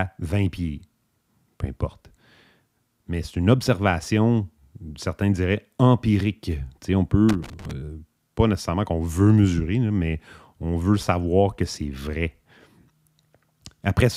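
An irregular burst of scratchy crackle breaks into the speech from 7.29 to 7.71 s, right after "certains diraient empirique on". It is loose connector crackle: a worn or dirty contact repeatedly makes and breaks, chopping the signal.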